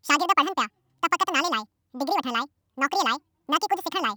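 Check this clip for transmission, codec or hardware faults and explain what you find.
One fault runs through the entire speech recording: the audio was read two samples at a time (double speed). The reader treats each pair of samples as a single frame, as if the stream had two channels or samples twice as wide, so playback runs at 2.0 times normal speed and the speech is an octave higher. A spectrogram shows syllables squeezed to half their width and harmonics and formants doubled in frequency.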